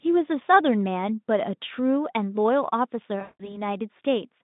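VoIP packet loss concealed by the speech codec breaks up this speech recording from 3.21 to 3.62 s. About 180 ms of audio went missing, which fits nine 20 ms packets, and the decoder filled the hole by repeating its last pitch and spectral shape at falling gain, so the voice smears into a buzzy tone or coloured noise that fades. Because each rebuilt frame feeds the next, the sound stays weak or distorted until about 3.62 s. The Speex narrowband path, about 150 Hz to 3.7 kHz, carries little codec damage of its own.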